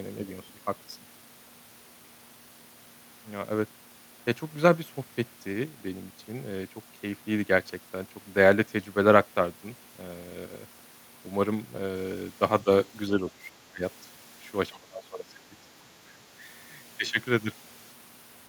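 Between 12.64 and 16.48 s the speech sinks by up to around 20 dB: at 12.64 s, 13.17 to 13.43 s, 13.62 to 13.83 s, 14.7 to 15.95 s and 16.17 to 16.48 s. This is speech suppressed in double talk, likely from an echo canceller attenuating the near talker during overlap.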